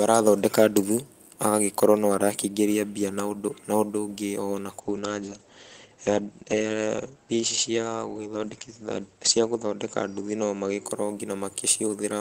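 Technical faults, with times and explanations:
4.8–10.91 s, call bitrate drop: the encoder's bit budget fell sharply, which fits a fall from about 32 kbps to about 11 kbps. The audio sits at its coarsest for roughly 4.65 s. With so few bits the codec quantises the spectrum more crudely, giving a rough, watery texture, and it narrows the coded bandwidth from 20 kHz to 8 kHz, so everything above 8 kHz vanishes and the sound turns muffled until the rate recovers.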